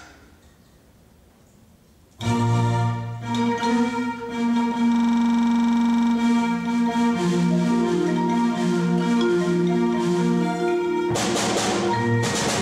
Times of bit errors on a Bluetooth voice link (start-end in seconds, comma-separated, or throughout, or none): none